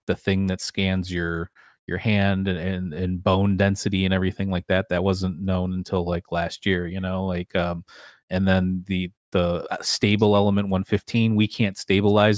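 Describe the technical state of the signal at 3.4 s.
At 3.4 s the speech signal is intact, with no dropout, clipping, distortion or other audible fault.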